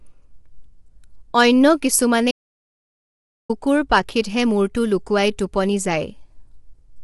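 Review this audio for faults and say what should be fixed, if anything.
The speech has the rough, grainy texture of low-delay AAC compression throughout, which fits AAC-ELD at around 32 kbps. Its short frames resolve harmonics poorly and leave noise between them. A spectrogram shows smeared harmonics and nothing above 11.7 kHz. Encode at a higher bitrate to prevent this.

An audio dropout to silence runs from 2.31 to 3.49 s, losing about 1.18 s of speech. The input was likely lost while the recorder kept writing silence. The waveform goes dead flat and the spectrogram blank, with no room tone. Check connections and mute state before and during recording to prevent this.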